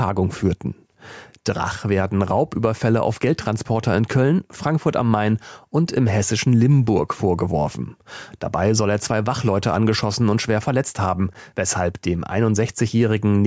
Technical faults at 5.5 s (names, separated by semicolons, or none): gain pumping